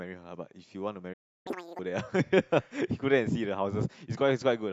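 At 1.13 s a playback stall sets in, most likely because the player ran short of buffered data or its output thread was held up. The speech drops out for about 321 ms, falling silent in mid-flow until 1.47 s, then resumes.

From 1.47 to 1.79 s the player runs a catch-up at higher speed, resampling its backlog to recover the lost time. The speech plays at 2.0x speed, sounding hurried and squeaky, pitched up by around ten semitones, before settling back to normal speed and pitch.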